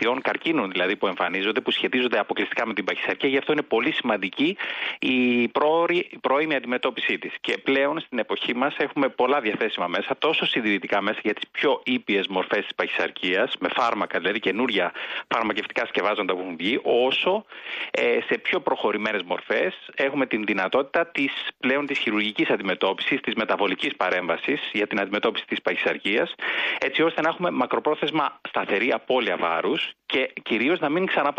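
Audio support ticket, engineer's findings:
Listened through the whole clip and found nothing to flag, so there's no fault to log on this ticket.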